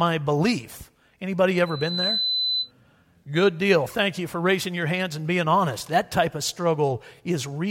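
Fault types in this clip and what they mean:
Loudspeaker feedback squeal: microphone picks up its own loudspeaker, so a 4 kHz tone swells over about 0.4 s, squealing from 1.66 to 2.71 s.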